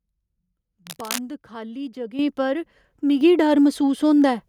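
At 2.19 s the speech and the room behind it jump up together by about 8 dB, then again by about 5 dB at 3.21 s. This is microphone volume stepped up: the call software judged the input too quiet and raised the device's input gain in single abrupt steps.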